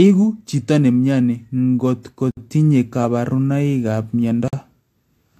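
At 2.31 s the speech drops out for about 61 ms, just before "tinye kabarunikab", then again at 4.48 s for about 49 ms, right after "ko tinye kabarunikab". Both are gaps at a join of encoded pieces: separately encoded chunks were butted together untrimmed, so encoder start-up delay and end padding sit in the middle of the talk. You hear a sudden hole with softened edges, and the speech resumes exactly where it stopped.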